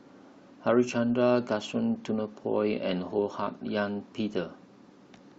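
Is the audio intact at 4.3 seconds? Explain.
Yes, the speech runs through 4.3 seconds without any audible fault.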